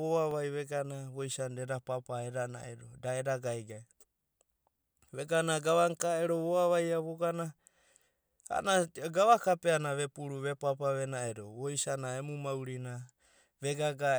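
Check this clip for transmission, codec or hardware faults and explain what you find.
One fault is present: a block of digital silence at 0.31 s in the speech. For about 0.67 ms the samples drop straight to silence and then resume, a dropout short enough to fit a 32-sample block left unfilled. With no fade at either edge, the waveform jumps to silence and back within a fraction of a millisecond. The two steps merge into a tick or dip rather than an audible hole.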